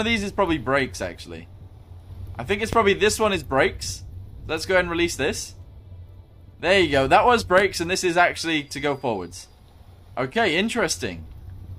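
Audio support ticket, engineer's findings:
Loud pop, twice: sharp single pops at 2.73–2.76 s and 7.58–7.61 s, each roughly 15 dB above the programme, which continues underneath. Likely a voltage step or spike from a plug, switch, static discharge or driver glitch, shaped by downstream circuitry.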